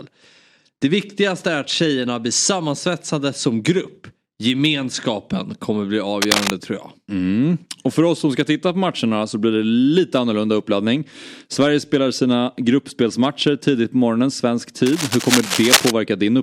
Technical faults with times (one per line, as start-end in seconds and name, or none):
6.22-6.53 cable scratch noise
14.86-15.91 cable scratch noise